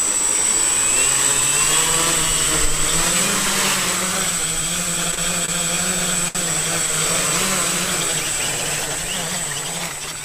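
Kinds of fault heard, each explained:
Short stall from a late packet: at 5.15 s, 5.45 s and 6.28 s the sound hangs for a moment because a packet arrived after its playout time and the jitter buffer had nothing left to play. The receiver held the last audio for about 28 ms, 27 ms and 66 ms, then resumed exactly where it stopped. Nothing is lost, but each spot is briefly smeared or buzzy, and the pause lengthens the delay by the same amounts.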